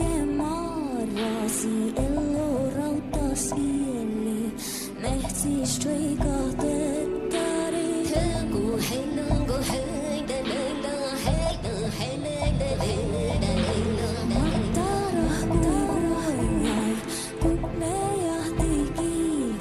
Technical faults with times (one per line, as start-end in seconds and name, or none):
12.71-16.83 doubled audio track